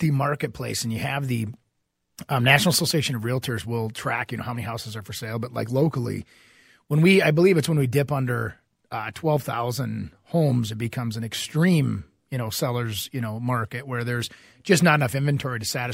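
A speech recording with no technical faults to point to. Nothing in it calls for a timestamp or a cause.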